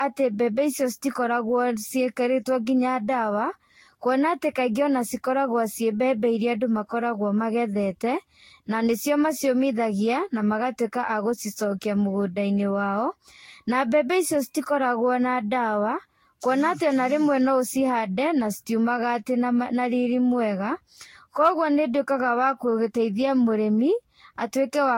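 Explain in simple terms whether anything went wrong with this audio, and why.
Generation loss runs through the whole recording. The speech sounds swirly, smeared and hollow, with softened consonant onsets and nothing above 16.6 kHz. The likely cause is repeated lossy re-encoding, perhaps around seven times, each pass adding fresh damage on top of the last.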